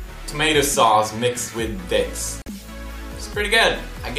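The audio has a gap at a join of encoded pieces from 2.42 to 2.46 s, a silence of about 45 ms. Separately encoded sections were joined untrimmed, leaving encoder delay and last-frame padding, with codec-smeared edges. Unlike a dropout, the sound resumes exactly where it stopped.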